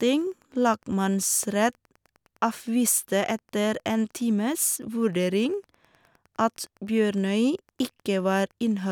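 Wi-Fi interference runs throughout. The circuit rectifies a nearby radio beacon every 102.4 ms. It ticks ten times a second, faint beneath the speech.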